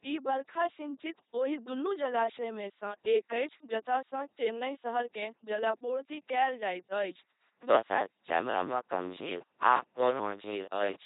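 A speech recording run through an LPC-10 vocoder at 2.4 kbit/s, with heavy codec damage. Every stretch is forced to be either pulse-excited or noise-excited, so the voice becomes a buzzy, mechanical robot tone. On a spectrogram, the harmonics look unnaturally regular and nothing appears above 3.8 kHz. From 7.48 s to the end, buffer tearing adds a steady rattle at 100 Hz, which points to buffers of about 10 ms. Roughly half of each buffer repeats audio from about 20 ms earlier. The waveform shows two hard discontinuities in every 10 ms period, and the spectrogram shows thin vertical lines at those points.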